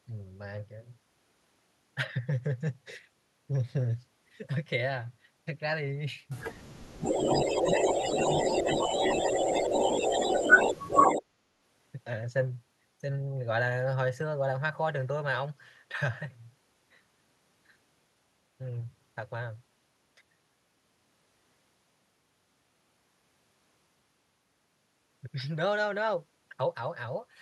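At 6.87 to 7.2 s the speech gets pulled down hard, roughly 40 dB. That's likely speech suppressed in double talk: the echo canceller can't tell the talker from its loudspeaker echo and ducks both. From 7.02 to 11.22 s there's an echo leak, a delayed copy of the speech arriving about 145 ms late and sitting a little louder than the speech itself, likely loudspeaker pickup the canceller didn't fully remove. Inside that stretch the ducking keeps returning at 7.45 to 7.83, 8.63 to 8.9 and 9.12 to 9.51 s, with shallower dips of around 5 to 10 dB. It hits hard again at 11.18 to 11.33 s, dropping about 30 dB.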